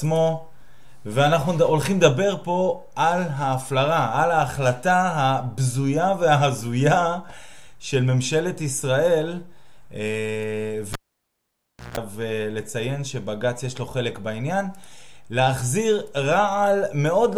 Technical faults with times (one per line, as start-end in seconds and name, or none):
10.93-11.97 cable pulled and plugged in